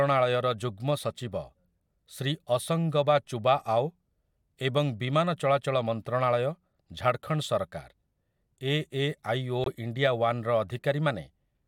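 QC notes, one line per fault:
9.64–9.68 s, corrupt frame muted: bit errors damaged the compressed stream just after "ଏ ଏ ଆଇ ଓ", the decoder rejected the affected frames, and the player put silence in their place. The speech drops out abruptly for about 38 ms, a gap that fits two lost frames of roughly 19 ms each, and resumes on time with no shift in timing because the missing frames were filled rather than skipped.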